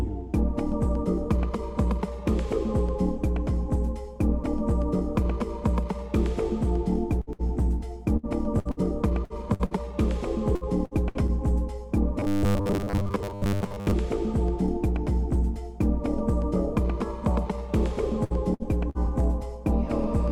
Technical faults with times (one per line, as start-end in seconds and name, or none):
7.21-7.42 burst of packet loss
8.17-8.26 burst of packet loss
8.59-8.80 burst of packet loss
9.25-9.80 repeated packet loss (robotic sound)
10.55-11.31 repeated packet loss (robotic sound)
12.20-13.93 robotic sound from repeated short buffers
18.24-19.10 repeated packet loss (robotic sound)